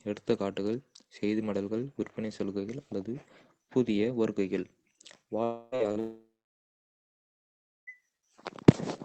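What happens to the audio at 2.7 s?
Nothing goes wrong at 2.7 s; the speech carries on intact through that moment, with only the ordinary band-limited character of the call path it travels through.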